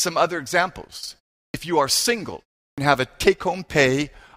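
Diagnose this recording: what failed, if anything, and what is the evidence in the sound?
Speech restarts abruptly at 1.48 s and 2.71 s, each time missing its first 61 to 67 ms after a pause of about a third of a second. This clipped start after a pause points to the playback device sleeping in silence and waking late.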